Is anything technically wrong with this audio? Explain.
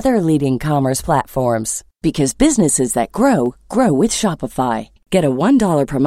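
Yes. Two sharp clicks sit in this speech, at 1.11 s right after "leading commerce" and at 3.46 s just before "grow with". They are likely dropped samples. A fraction of a millisecond goes missing, so the waveform jumps abruptly, giving a single brief tick.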